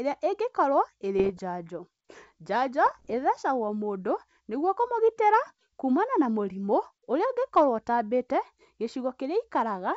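Speech, carried over G.722 wideband coding, breaks into pops and rough, gritty bursts with brief level jumps from 1.19 to 1.39 s and again from 2.86 to 3.16 s. These are bit errors on an ADPCM link, at a rate of roughly half a percent or more. Each flipped bit knocks the decoder's step size and predictor off track, so the damage rings on briefly.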